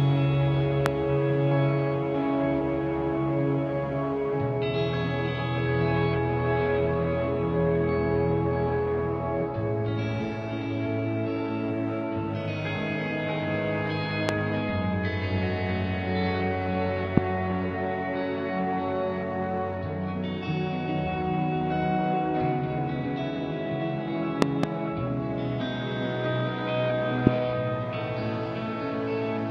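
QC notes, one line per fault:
0.86 to 27.29 s, loud pop: sharp single pops at 0.86–0.88, 14.29–14.31, 17.17–17.20 and 27.27–27.29 s, and a pair in quick succession at 24.42–24.66 s. Each is a brief voltage step or pulse, likely from a plug, switch, static or driver glitch, riding about 20 to 25 dB above the sound, which continues underneath. On the waveform each shows as a tall narrow spike. On the spectrogram each is a thin vertical broadband stripe.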